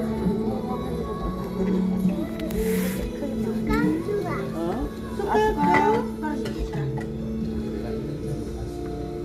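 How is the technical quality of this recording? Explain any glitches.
No technical faults can be heard in this recording of sounds, so there are no glitches to explain.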